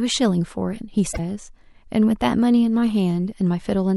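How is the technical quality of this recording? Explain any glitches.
The recording has one audible glitch. From 1.11 to 1.19 s the speech jumps ahead and is briefly disrupted. This is likely a broken MP3 bit reservoir: after frames were dropped, the following frames pulled borrowed data from the wrong place. The roughly 80 ms of damage spans about three 26.1 ms frames.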